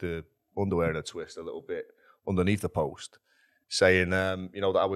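No dropouts, clicks, distortion or level jumps are audible anywhere in the recording.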